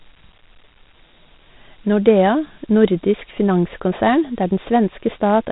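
A gritty, grainy hiss rides along with the speech from start to finish, and everything above about 3.9 kHz is gone, leaving a dull telephone-band sound. This is Dialogic VOX ADPCM: coarse 4-bit steps fitting 32 kbps at an 8 kHz rate add plainly audible quantisation grit.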